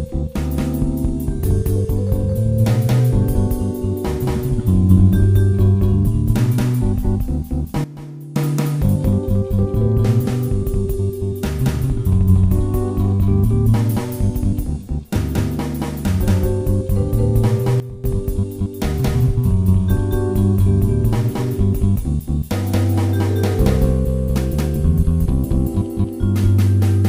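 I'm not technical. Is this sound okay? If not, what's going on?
No, there are two spots where the sound suddenly gets much quieter, then jumps back up. The first runs from about 7.84 to 8.36 seconds and the second from about 17.8 to 18.04 seconds. The background noise drops and returns right along with everything else. That's a sudden gain jump, likely caused by the volume being switched in one step instead of eased gradually.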